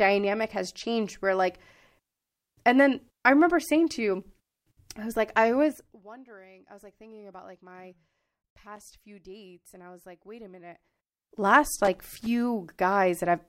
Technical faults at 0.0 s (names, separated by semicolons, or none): none